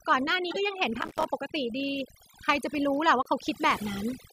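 A speech recording runs with overdone noise removal throughout: the noise reduction was set too hard, so frequency bands near its noise estimate are pulled almost to nothing, taking the quieter parts of the voice with them. The background sits in near silence sprinkled with twinkling specks. Corrupt frames were decoded twice, each time about two damaged frames played as if valid, so misread gains and codes throw energy into the wrong frequencies. From 0.51 to 0.58 s the error peaks around -20 dBFS, and from 3.23 to 3.28 s it is much fainter, around -40 dBFS. Processor overload crackle runs from 1.01 to 1.28 s: the processor missed a long run of buffer deadlines, about 30 of them, with short gaps that fit buffers of around 5 ms. Each miss drops a sliver of silence with hard edges, and together they make a gritty crackle that tears through the voice until the load passes.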